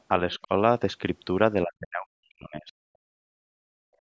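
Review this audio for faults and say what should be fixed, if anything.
Other side's voice leaking through, 0.32–0.46 s: a faint second voice, around 30 dB below the talker, likely loudspeaker echo the canceller left in the microphone signal.

Speech suppressed in double talk, 1.65–2.77 s: the talker drops sharply, by around 40 dB, for about a second while both sides speak, likely as the canceller mistakes the overlap for echo.

Background gated by the echo canceller, 3.05 s to the end: room sound dips about 39 dB as the canceller clamps the microphone during loudspeaker playback.

To prevent these, use a better-converging echo canceller with reliable double-talk detection, reduce loudspeaker level or use a headset, and replace hard gating with gentler suppression and comfort noise.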